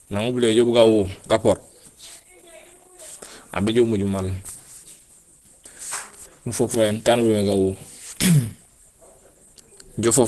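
From start to finish the speech carries plainly audible Opus compression. Nothing reaches above about 12.1 kHz, which fits a super-wideband setting, and the sound is muffled and hoarse, as when the encoder runs in its speech-oriented hybrid mode at a low rate, likely near 16 kbps. A spectrogram would show a hard ceiling at 12.1 kHz with grainy, noise-filled texture just beneath it, while the waveform itself looks ordinary.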